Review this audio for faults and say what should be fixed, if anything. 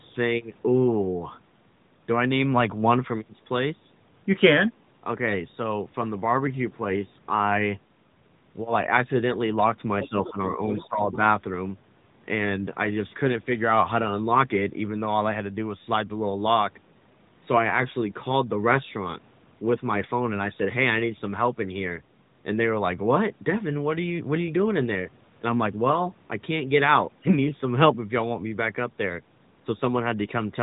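Other side's voice leaking through: from 10.03 to 10.09 s, a brief scrap of a second voice sits roughly 15 dB below the talker. It is likely residual loudspeaker echo that the echo canceller failed to fully remove from the microphone signal. Prevention: let the canceller converge properly and add residual echo suppression, or use a headset instead of the loudspeaker.

Speech suppressed in double talk: between 10.86 and 11.11 s, the talker's level dips by around 15 dB, for about a fifth of a second in total, while both sides speak at once. The echo canceller likely treated near-end speech as echo and attenuated it. Prevention: tune the double-talk detector so near-end speech is recognised and left unattenuated while the far end is active.

All of this is heard through the AMR narrowband mobile codec at 12.2 kbps, which band-limits the audio to below 3.8 kHz.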